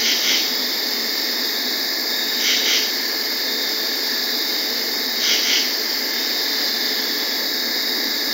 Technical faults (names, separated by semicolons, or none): none